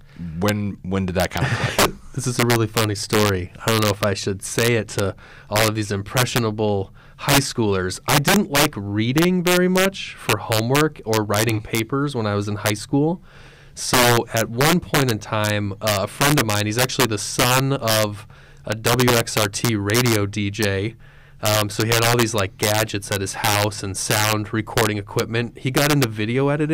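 Throughout the speech, integer overflow: gain pushed about 9 dB past full scale, and the loudest peaks, around one percent of samples, wrap to the opposite sign instead of limiting. Each sounds like a violent crack; waveforms show full-range vertical jumps, spectrograms broadband vertical streaks.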